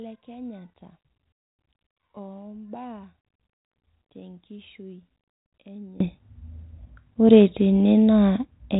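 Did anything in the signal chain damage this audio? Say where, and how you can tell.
Yes. From 0 to 6.0 s the speech falls by about 25 dB and sounds faint. Then it returns. That fits one channel inverted, likely a polarity swap in the analogue wiring. In mono the shared centre cancels, leaving only the channel difference.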